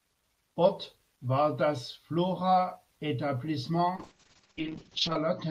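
A call bitrate drop starts at 3.97 s and runs to the end of the clip. The encoder's rate falls from 32 kbps to 6 kbps, staying at the lowest for about 1.2 s, and the audio band narrows from 20 kHz to 8 kHz. The speech turns coarse and muffled, with its upper frequencies cut away.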